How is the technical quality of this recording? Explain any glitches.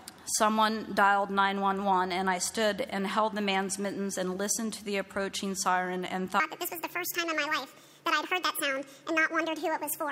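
There's one clear problem: a section at the wrong speed. From 6.4 s to the end, playback runs 1.68 times fast, so the sound jumps up around ten semitones and gets hurried, likely from being played against the wrong clock.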